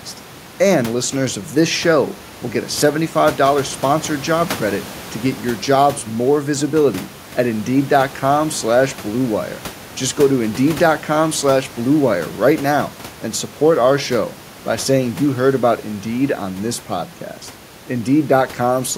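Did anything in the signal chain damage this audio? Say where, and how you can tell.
No, nothing in this speech recording stood out on listening as damage from the signal chain, and the room's background noise sits about 22 dB below the speech.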